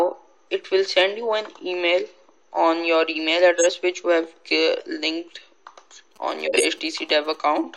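The audio has corrupt frames decoded at 3.55 s, 4.77 s and 6.45 to 6.65 s. Damaged compressed data went through the decoder anyway, so each spot spills energy into the wrong frequencies. The first and last are loud. The middle one is faint and covers a couple of frames. From 6.16 to 7.59 s there are GSM signalling bursts: a nearby 2G phone handshaking with the network, rectified by the audio circuitry into a galloping dit-dit-dit of short buzzes at about 217 Hz. It sits well below the main sound.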